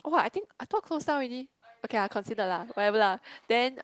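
From 0.75 to 0.85 s, a lost packet was rebuilt from error correction. About 60 ms of audio, which fits three 20 ms packets, went missing, and the decoder played the low-bitrate copies carried in later packets. There is no gap, but that stretch of speech sounds rougher and noisier than the Opus-coded audio around it.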